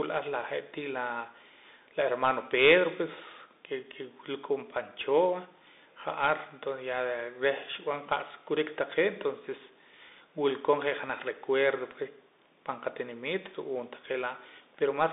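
A speech clip carried through a Bluetooth CVSD headset codec for its whole length, where a one-bit delta stream with an adapting step, consistent with a 64 kbps link, confines the line to roughly 250 Hz to 3.7 kHz, leaving the sound thin and muffled, with scratchy s sounds, distorted loud peaks and granular hiss underneath.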